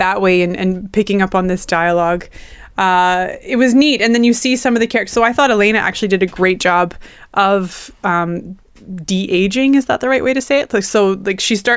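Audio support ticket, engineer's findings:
No faults found in the speech signal across the clip; nothing to attribute to any component.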